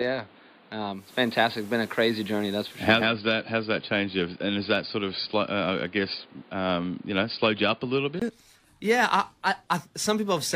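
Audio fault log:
0.00–8.22 s, input switched to a poorer device: The sound is band-limited, sits roughly 5 dB quieter, and carries a new noise floor about 30 dB down, giving a dull, boxy character. At 8.22 s a 20 ms gap precedes the return of full bandwidth and level. The likely cause is the recording input moving to a narrower-band microphone or headset call profile, with its own tone and noise, and then switching back.
0.91–3.12 s, digital radio blending to analogue: The receiver lost its digital stream and cross-faded over 222 ms to the FM broadcast of the same station, and later faded back. The analogue path brings hiss roughly 30 dB below the signal and a level shift of about 3 dB, so the sound becomes noisier and changes in loudness across this span. Both transitions are gradual because of the cross-fade.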